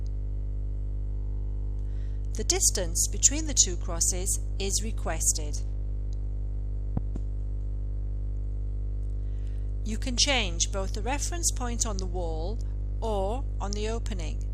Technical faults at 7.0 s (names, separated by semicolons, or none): loud pop